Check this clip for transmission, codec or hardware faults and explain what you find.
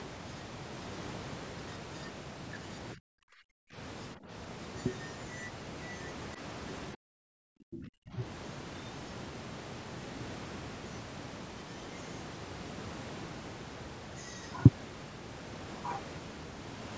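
The speech dips in four places. Speech suppressed in double talk at 2.95–3.78, 4.15–4.31, 6.35–6.39 and 6.94–8.21 s is likely an echo canceller turning down the talker during overlap, with dips down to roughly 40 dB at their deepest.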